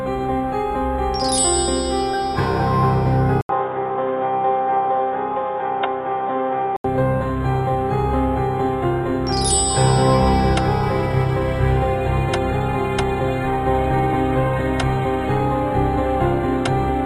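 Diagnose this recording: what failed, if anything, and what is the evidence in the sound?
The driver-stage input likely switched to a poorer device from 3.41 to 6.84 s. After an 80 ms silence, nothing above 3.8 kHz passes, so the sound turns dull and boxy.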